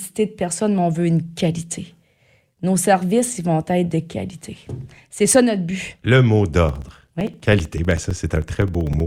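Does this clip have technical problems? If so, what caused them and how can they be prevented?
Yes. From 6.69 to 9.00 s the speech ticks evenly every 64 ms. These are periodic USB or driver dropouts, where each stall turns about 4 ms of audio into silence. Prevent them by using a dedicated USB port, disabling USB power saving and background polling tasks, and enlarging the driver buffer.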